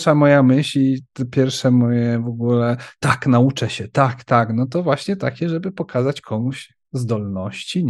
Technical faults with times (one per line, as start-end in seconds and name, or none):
none